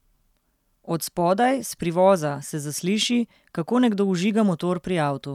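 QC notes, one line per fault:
No faults heard in the speech recording; nothing to log.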